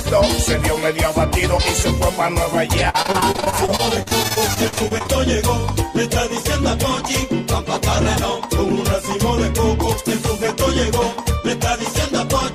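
Repeated packet loss (robotic sound) runs from 2.89 to 5.10 s: dozens of short dropouts, the longest about 47 ms, each patched by extending the preceding sound. About a quarter of the stretch is filled-in material, giving a choppy texture with fragments missing.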